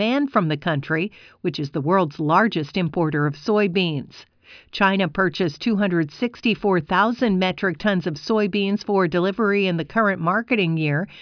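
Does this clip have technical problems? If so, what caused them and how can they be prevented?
No, the speech signal shows no audible technical faults at any point, so there is nothing here that needs a cause traced or a fix applied.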